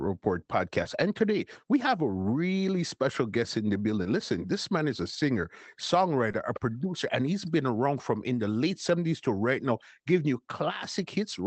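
At 0.83–0.87 s, 4.03–4.07 s after "special guest in the", and 6.31–6.35 s before "a producer and he's", short concealed packet loss occurs: about 20 ms of audio went missing each time, and the decoder extrapolated the preceding sound before blending back, leaving a brief smear or wobble.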